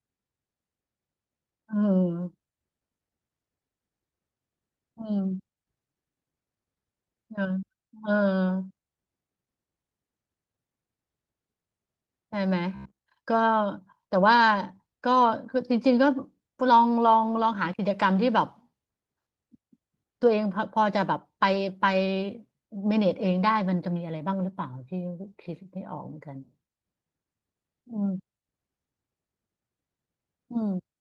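Lost packet rebuilt from error correction, at 5.23 s. A brief patch of speech, about 20 ms long, turns rougher and noisier, which points to a single lost packet. There is no silence or dropout because the following packet carried a low-bitrate backup of the missing one, and the decoder played that instead. The substitute is coarse, so the speech briefly sounds grainy before clean audio resumes.

Robotic sound from repeated short buffers, from 12.75 to 13.06 s. For about a third of a second the speech becomes a stiff, metallic buzz locked near 66.8 Hz, while still loosely tracking the syllables. The likely cause is audio arriving too slowly, so playback loops its most recent slice instead of waiting. A 66.8 Hz repetition fits a buffer of roughly 15 ms being replayed, and repeats fill most of that stretch while real audio is skipped.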